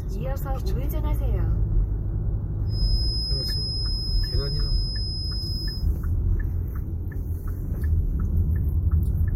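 An everyday-sound recording with a feedback whistle from 2.64 to 5.89 s: a thin, steady 5.1 kHz tone sits roughly 10 dB under the sound, likely from a loudspeaker-to-microphone loop held just at the edge of feedback. A spectrogram would show a single bright horizontal line there.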